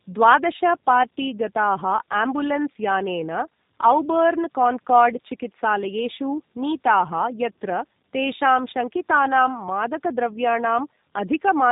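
From start to finish the speech sounds rough, muffled and warbly, with nothing above about 3.8 kHz. This is tandem speech coding: the signal appears to have passed through AMR-NB at 10.2 kbit/s, then G.711 A-law at 64 kbit/s, and finally G.729A at 8 kbit/s. The two low-rate speech codecs each discarded detail, and the second worked on the first's already degraded output, so their losses stacked.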